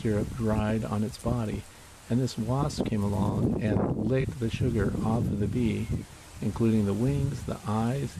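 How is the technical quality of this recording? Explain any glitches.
There's one glitch worth flagging, a corrupt frame concealed, running from about 4.21 to 4.25 s. The decoder caught damaged data in that AAC frame and covered it itself, muting it or reusing a scrambled version of the previous good spectrum. The roughly 38 ms span points to a single frame hit.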